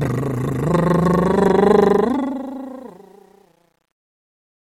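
From 1.85 s the music's fade-out shows truncation distortion, as though cut to 10 bits without dither. It turns gritty from 2.61 s, its waveform staircased, its spectrogram speckled with broadband hash.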